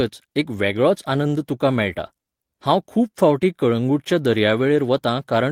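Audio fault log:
No faults detected across the speech recording.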